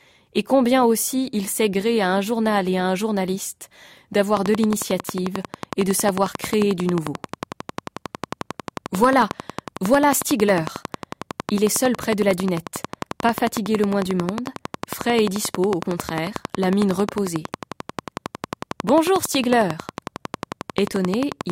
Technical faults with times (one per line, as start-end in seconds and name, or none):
4.37-21.51 train of clicks